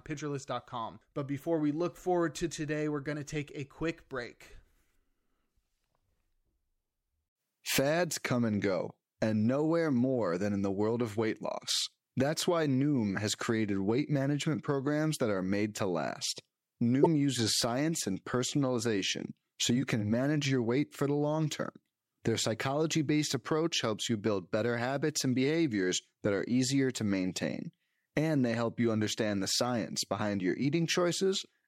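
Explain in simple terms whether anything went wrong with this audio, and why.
At about 17.02 seconds, just before "uses science and personalization", there is a brief glitch lasting roughly 40 milliseconds. This is damaged data in a compressed stream: some bytes of the file were corrupted, so the decoder lost its place and jumped ahead to the next readable chunk.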